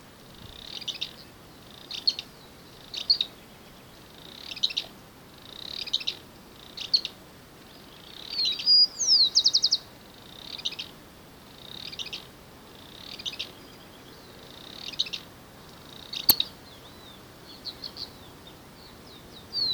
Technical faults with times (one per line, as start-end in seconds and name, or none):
16.30 integer overflow